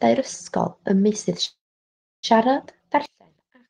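From 1.45 to 2.25 s a call audio freeze stalls the speech: a brief fading tail, then roughly 0.67 s of silence, likely from delayed packets draining the jitter buffer, before resuming intact.

From 3.06 s to the end, the sound drops by about 33 dB to a faint residue, likely one channel inverted, so the centred speech cancels when summed to mono.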